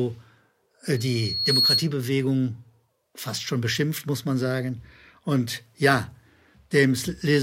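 From 0.96 s to 1.92 s a loudspeaker feedback squeal appears: a microphone is re-capturing its own loudspeaker, and the loop gain exceeds unity near 4.3 kHz. That tone swells over most of a second into a piercing squeal, ending a few dB above the speech.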